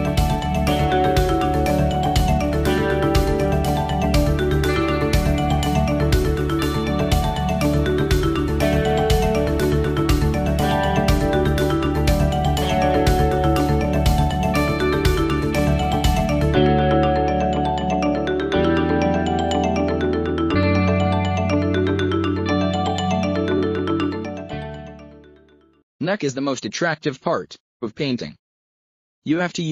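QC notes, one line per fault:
23.57–23.59 s, repeated frames: a 23.2 ms block plays twice, fitting a single compressed frame resent. A brief stutter adds 23.2 ms.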